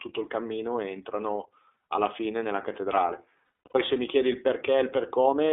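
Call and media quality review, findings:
iLBC codec, whole clip: band-limited, slightly rough and synthetic speech, nothing below about 300 Hz or above 3.6 kHz. Narrowband iLBC with 30 ms frames, each coded independently, which fits the 13.33 kbps mode. The codec damage is plainly audible.

Lost iLBC frames, 3.66–3.76 s: held, buzzy vowel-like smear where the decoder repeats the last pitch cycle mixed with noise. About 240 ms is gone across roughly 0.3 s, which fits eight 30 ms frames, with the longest gap around 100 ms.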